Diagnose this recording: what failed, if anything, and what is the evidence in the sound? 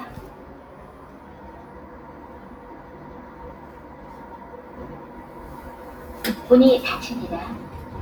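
A noise suppressor built for speech was left running in the call-processing stage, and it treats sustained parts of these sounds as noise. Onsets pass, but held tones and decaying tails are pulled down by about 5 dB, so the level pumps and thins throughout.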